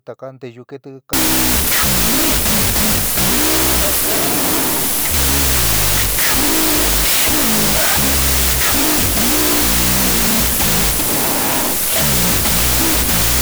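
A wrong sample width fault runs from 1.13 s to the end of the clip. Samples written as 32-bit float are being read as 16-bit integers, so each float is split into two bogus values. The halves carrying exponent and upper mantissa bits keep a faint trace of the real waveform, while the rest becomes harsh noise. The speech sits buried under loud hiss, playing at half speed and an octave low.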